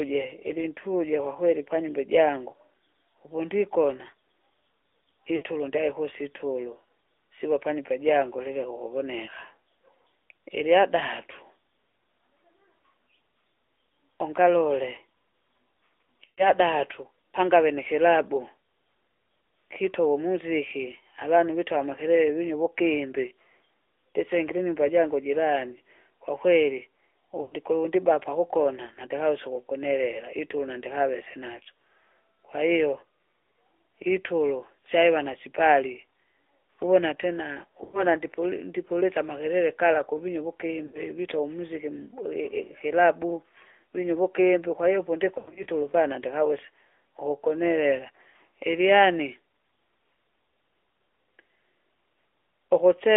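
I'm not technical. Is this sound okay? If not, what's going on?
No. The whole call has the AMR narrowband mobile codec sound: thin and buzzy, with nothing high-pitched. That is unlike a plain muffled recording, because the voice itself sounds plainly synthetic.

There are also lost AMR speech frames at 5.36, 16.24, 27.42, 37.84, 40.86 and 45.38 seconds. The voice briefly smears and fades, then returns rough. That is unlike a clean dropout, which would be an instant silence.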